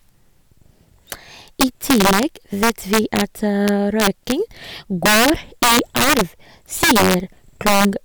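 At 1.12 s a single sharp crack marks the first integer overflow. More bursts follow at 1.61 to 2.23 s, 2.63 to 3.21 s, 3.68 to 4.32 s, 5.06 to 6.21 s, 6.83 to 7.14 s and 7.67 to 7.85 s. Loud speech peaks exceed the largest integer value by up to about 8 dB. Instead of limiting, they wrap to the opposite sign. Each wrap jumps across the full range. The result is violent cracking, far harsher than clipping.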